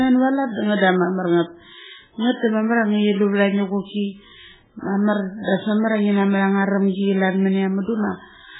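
MP3 compression runs throughout the speech, likely the cause of its heavy damage. Nothing is heard above 3.8 kHz, and weak frequency lines flicker on and off between frames, giving a watery, swirling texture with metallic chirps on s sounds and smeared attacks, consistent with a very low bitrate near 8 kbps.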